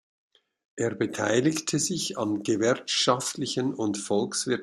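No technical faults can be heard anywhere in this speech recording. At no moment does anything in the sound stand out as a fault.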